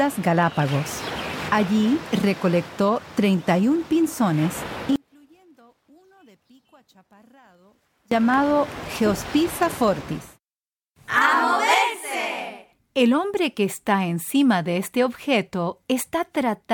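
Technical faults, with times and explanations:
4.96 to 8.12 s, one channel inverted: one stereo channel likely flipped polarity, so content common to both sides cancels when summed to mono. Level drops by about 33 dB, leaving only a faint residue of the channel difference until normal sound returns at 8.12 s.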